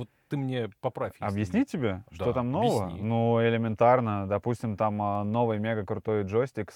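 Three single sharp clicks sit in the speech: at 2.16 s, just before "что там нового", then at 3.04 s and 5.15 s. Each is a brief tick with a thin vertical line across the spectrum and no gap in the sound. The likely cause is dropped samples, with a fraction of a millisecond missing from the stream each time, so the waveform jumps abruptly to a later value and that discontinuity produces the click.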